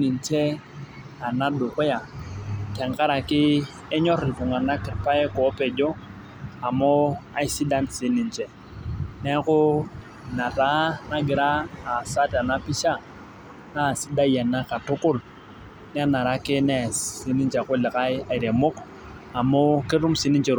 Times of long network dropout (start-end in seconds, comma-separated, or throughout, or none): none